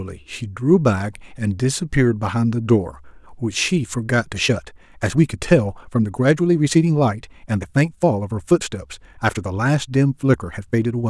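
A time-stretched section runs from 4.18 s to the end of the speech. At that point the pace jumps abruptly to about 1.35 times the earlier rate while the pitch stays where it was, so the delivery turns hurried. The likely cause is software squeezing this stretch into a shorter length, keeping the pitch by dropping short fragments and splicing the remainder together.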